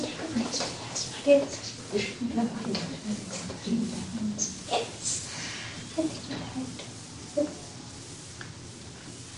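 No technical faults can be heard anywhere in the recording. The sounds it holds come through with nothing in the recording or playback chain audibly getting in their way.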